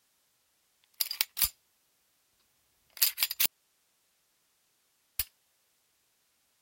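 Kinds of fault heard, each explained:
Audio dropout to a faint residue: The sound cuts off abruptly at 3.46 s and returns at 5.19 s, 1.74 s later. The gap holds only hiss, roughly 45 dB below the signal. The wanted signal was likely lost while the path after it stayed live.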